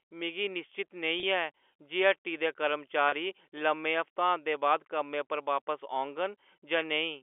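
At 1.20 s, after "मिगी निश्चत", and again at 3.09 s, after "जे हट्टी दे", about 30 ms of audio goes missing. Packet loss with pitch repetition fills each gap by looping the last pitch period, so the speech briefly holds a buzzy tone. On a spectrogram, the harmonics run flat and unchanging through each gap. On the waveform, identical repeated cycles shrink in height.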